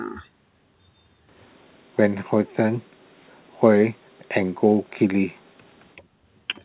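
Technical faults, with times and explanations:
3.68–3.78 s and 5.95–6.03 s, speech suppressed in double talk: the echo canceller likely mistook the talker for loudspeaker echo while both sides spoke at once, and turned the whole signal down to be safe. The talker dips sharply for roughly a tenth of a second at the first point and about 70 ms at the second, by about 20 dB at the first point and a gentler drop of about 10 dB at the second. This is heard through a call codec that leaves nothing above 4 kHz, which fits a 64 kbps G.711 mu-law stream.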